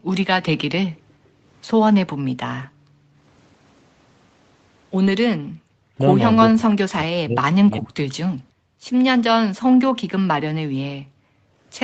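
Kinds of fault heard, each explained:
Background gated by the echo canceller: at 0.0–0.09, 0.94–1.47, 2.22–3.21, 8.34–8.86 and 10.99–11.6 s, the room sound falls away by about 40 dB and then returns. While far-end audio played from the loudspeaker, the canceller clamped the microphone, muting the ambience until it released.
Echo leak: around 2.63–2.67 s a faint delayed copy of the speech appears, about 0.4 s behind the original and around 35 dB down. The likely cause is loudspeaker sound that the far side's echo canceller failed to fully remove, returned across the call.
Lost packet rebuilt from error correction: at 5.05 s, a 20 ms stretch turns briefly rougher and noisier with no gap. That fits a single lost packet replaced by the lower-quality Opus backup copy carried in the following packet, which the decoder played in its place.
Speech suppressed in double talk: between 5.67 and 7.98 s the talker's speech dips sharply, roughly 40 dB at worst, over about one and a half seconds in total. 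This is likely the echo canceller mistaking overlapping far-end speech for echo and pulling both down.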